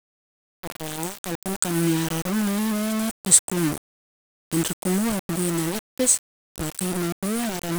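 From start to finish, the speech appears to have been stored with far too few bits, likely around 5, and rounded to the nearest step without dither: low bit depth without dither. Because the rounding error tracks the signal, the whole recording carries a grainy, gritty distortion that shifts with the speech, sitting only about ten decibels below it. The quietest passages collapse into silence or sputter as they flip between adjacent steps.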